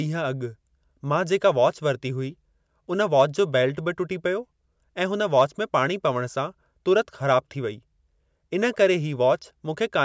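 Speech recording, no audible technical faults anywhere in it.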